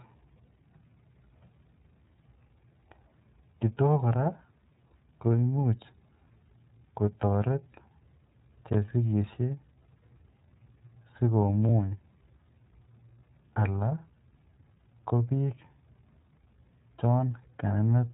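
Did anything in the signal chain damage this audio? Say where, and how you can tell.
Yes, at the codec stage: an iLBC codec damages the speech throughout. Nothing passes above 3.8 kHz, and the plainly audible rough, synthetic grain fits independently coded 30 ms frames at about 13 kbps. A plain low-pass or telephone band-limit would dull the sound without adding that coarse texture.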